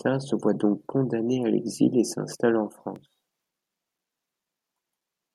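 Just after "l'exil et s'installe en", at 2.96 s, periodic USB or driver dropouts begin and continue to 5.01 s. About every 1.02 s, something blocks the USB bus or audio driver and a few milliseconds of signal are lost and replaced by silence, giving roughly three short ticks. Their strict regular spacing, and the fact that they sound only over signal, separate them from random packet-loss gaps or clipping crackle.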